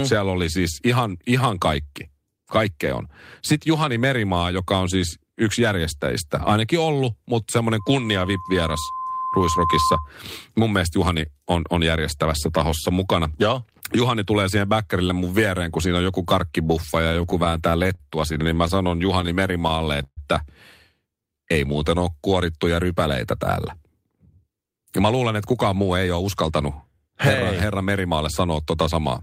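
From 7.79 to 10.11 s, loudspeaker feedback squeal: a 1 kHz tone swells over roughly two seconds, ending some 5 dB above the speech as the mic-speaker loop exceeds unity gain.

Between 16.93 and 20.19 s, repeated stalls (stutter): about two dozen brief holds, the longest 134 ms, where the receiver stretches the last sound while late packets catch up, so speech drags without losing content.

From 21.21 to 22.11 s, jitter buffer slow-down: repeated pitch periods add 100 ms, running speech at 90% speed with unchanged pitch and drawn-out sounds.

From 23.86 to 26.73 s, jitter buffer speed-up: trimmed pitch periods remove roughly 300 ms, so speech runs at 111% speed, hurried but at the same pitch.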